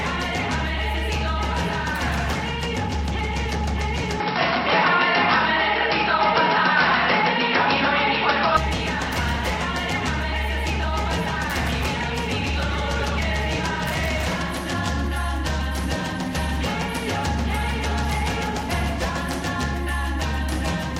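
At 4.2 s the sound abruptly turns duller and narrower, with no gap at the transition, and stays that way until 8.57 s, when the full bandwidth returns. This is most likely an input switched to a poorer device: the recording chain jumped to a lower-grade microphone path and back. On a spectrogram everything above 5.6 kHz disappears for that stretch, and a faint new noise floor appears, roughly 45 dB down. The waveform shows a level shift of around 5 dB.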